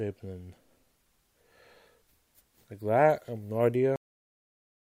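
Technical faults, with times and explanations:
3.96 to 5.00 s, cut-off end: sound halts mid-event at 3.96 s into flat digital silence with no decay, because the final buffers were never written or played.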